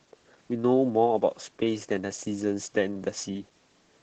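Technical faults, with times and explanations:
Throughout, Opus voice compression: the speech is plainly muffled and hoarse, with a faint robotic edge, and nothing is heard above about 8 kHz. The sound points to Opus in its SILK linear-prediction mode, running wideband at a low rate that fits roughly 12 kbps in 20 ms frames. The top is cut to save bits, and the excitation behind the vocal-tract model is coded coarsely, so the speech loses its breathiness and detail.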